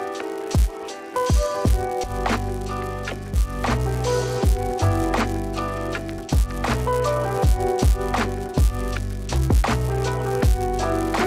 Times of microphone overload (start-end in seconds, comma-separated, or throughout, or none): none